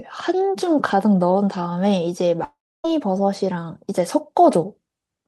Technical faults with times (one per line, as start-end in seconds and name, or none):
2.44-2.85 long network dropout